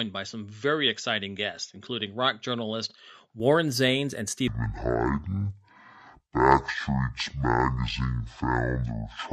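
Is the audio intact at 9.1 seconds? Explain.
No, 9.1 seconds falls inside a section at the wrong speed, running from 4.48 s to the end at 9.32 s. The speech plays at about 0.52 times its proper rate, likely from being fitted to the wrong clock, so it drags and drops roughly ten semitones.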